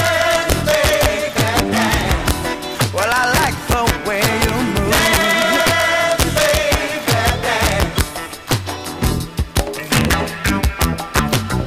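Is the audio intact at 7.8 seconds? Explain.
No. At 7.8 seconds the audio carries the same harsh, violent cracks heard throughout the clip, sharp snaps on the loudest moments that are far more abrupt than ordinary clipping distortion. This is integer overflow: the signal is driven about 4 dB past the largest value the integer format can hold, and instead of being limited, those peaks wrap around to the opposite sign, swinging across the full range. Only about half a percent of samples exceed the limit, so the cracks come in short bursts on peaks.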